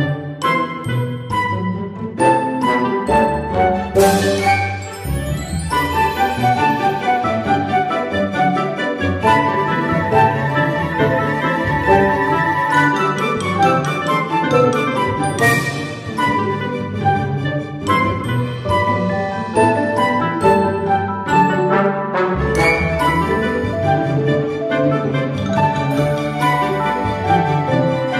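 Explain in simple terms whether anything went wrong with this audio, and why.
Compressed frames skipped: the player dropped short chunks of the file, so the audio jumps ahead slightly at 18.21 s and 25.57 s.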